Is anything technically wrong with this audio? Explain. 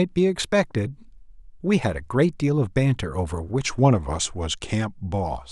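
Yes. From 3.66 s to the end of the clip, the speech abruptly slows by about 6% and drops in pitch by roughly 106 cents, a little over a semitone, so the speech sounds suddenly detuned and sluggish. This is likely a drift correction step: software reconciling two mismatched clocks changed the playback rate in a single jump to rebalance its buffer, shifting speed and pitch together rather than adjusting gradually.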